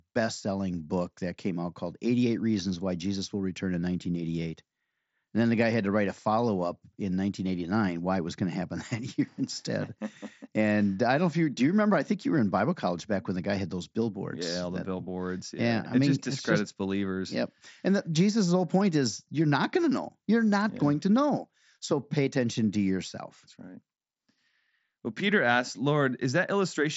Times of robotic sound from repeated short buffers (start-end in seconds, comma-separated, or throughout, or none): none